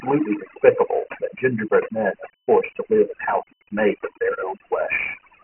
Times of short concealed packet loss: none

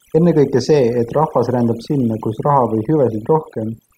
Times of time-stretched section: none

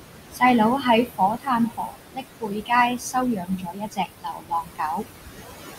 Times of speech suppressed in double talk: none

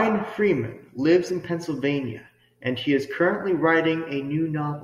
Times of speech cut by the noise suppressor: none

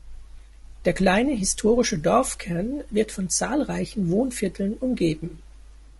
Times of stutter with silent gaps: none

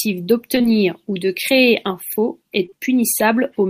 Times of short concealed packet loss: 2.66-2.74

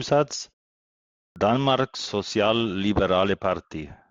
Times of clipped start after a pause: 1.32-1.36

